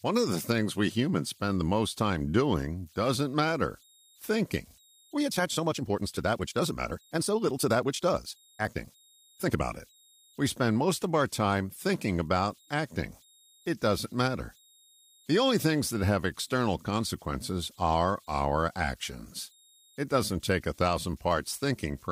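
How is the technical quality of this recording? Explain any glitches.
The recording has two faults: a faint tonal whistle that runs the whole length, and one passage where the pace jumps.

Converter idle tones are present throughout. A faint whistle around 4 kHz sits about 35 dB below the speech. It is easiest to hear in the pauses, and under quiet syllables it turns into a grainy texture. This happens when a delta-sigma converter runs without dither: with very small input levels its modulator settles into repeating bit cycles, and those cycles come out as steady high tones instead of random noise.

A time-stretched section runs from 5.01 s to 9.65 s, starting right after "doing doesn't matter thinking". The speech there plays about 1.63 times faster while its pitch stays unchanged, so it sounds rushed. The likely cause is duration-fitting software that shortened the passage by dropping short slices of audio and splicing the remainder together. 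That technique preserves pitch but disrupts the natural flow of syllables.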